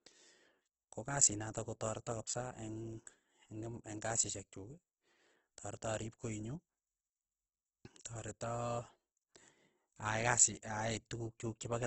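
Across the whole speech clip the sound is rough and grainy, with nothing above 8.1 kHz. This is likely Opus compression under heavy strain. The damage points to a low bitrate of around 12 kbps in the music-oriented CELT mode at wideband. Short of bits, the encoder preserves each band's energy but fills fine detail with folded or noise-like content. Tonal parts of the voice therefore come out noisy and textured rather than hollow or swirling.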